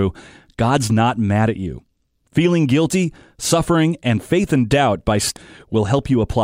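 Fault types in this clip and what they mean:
Damaged data in a compressed stream: part of the encoded stream was corrupted, so the decoder misread those bytes, lost frame sync and had to search for the next valid header. The speech is broken by a single brief glitch at 5.37 s.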